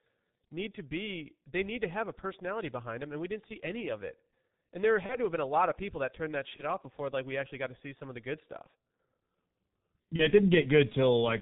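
From the start the speech runs through the G.723.1 codec. Nothing survives above 4 kHz, and the slowly updated voice model leaves the voice hoarse and muffled with smeared consonants, which fits its 6.3 kbit/s rate. Unlike a simple low-pass filter, it adds roughness as well as dullness.

At 5.06 to 5.16 s, just before "to have been a", VoIP packet loss concealed by the speech codec turns the sound into a brief fading buzz or coloured noise. The decoder stretched its last pitch and filter over what fits a single lost 30 ms frame. The same thing happens at 6.57 to 6.63 s, between "people that turned that" and "off before like we", and again at 10.16 to 10.28 s. A plain dropout would leave silence or a click. Here a stretched, fading sound fills the gap, and the sound stays weak briefly afterwards.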